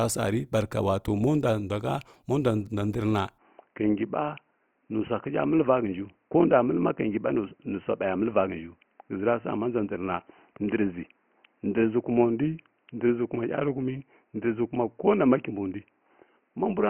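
Speech that goes dull and boxy at 3.38 s and stays that way to the end. Everything above 3 kHz vanishes, with no gap at the change, the same level and faint new background noise about 45 dB down. That points to the input likely switching to a poorer device.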